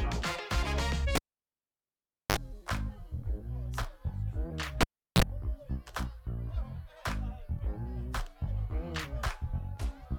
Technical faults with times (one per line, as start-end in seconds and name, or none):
1.15-2.37 cable pulled and plugged in
4.81-5.22 cable pulled and plugged in